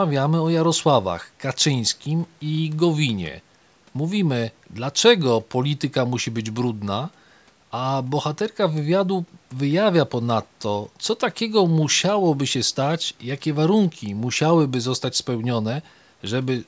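No technical faults are audible.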